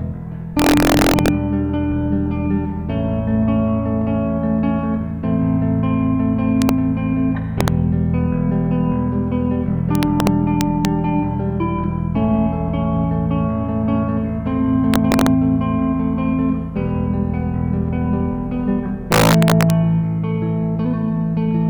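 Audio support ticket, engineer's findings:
Integer overflow at 0.59–1.28 s, 6.62–6.69 s, 7.61–7.68 s, 9.95–10.85 s, 14.94–15.27 s, 19.12–19.70 s. Violent cracks on loud peaks. Gain or mix sum overdriven about 1–4 dB past integer maximum, wrapping to opposite sign instead of saturating. Probable component: unclamped fixed-point gain stage.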